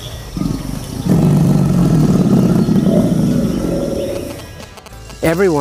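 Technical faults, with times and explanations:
4.16–5.35 s, GSM signalling bursts: a 2G handset close to the audio path was signalling, sending short clumps of radio bursts rather than a continuous transmission. The circuitry rectified that RF energy, and the resulting pulse envelope, repeating at 216.7 Hz, became a galloping dit-dit-dit of short buzzes that sits well below the sound, roughly 15 dB down, until it stops at 5.35 s.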